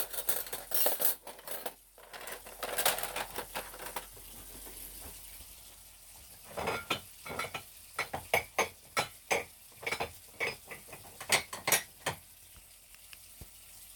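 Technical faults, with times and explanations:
Throughout, block size mismatch (padded): zero-filled gaps end each block, which fits 512-sample reads, causing an 86.1 Hz buzz and 0.938x playback speed with timbre kept.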